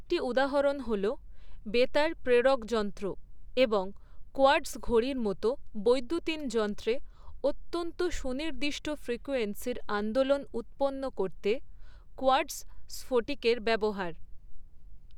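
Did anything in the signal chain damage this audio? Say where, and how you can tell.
No, nothing in the signal chain damaged this audio, and no stage shows any sign of harm.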